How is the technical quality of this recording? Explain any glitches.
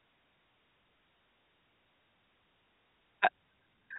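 No glitches: the speech shows the narrow band, topped out at 4 kHz, of G.711 telephone coding, which is simply the character of that path rather than a fault.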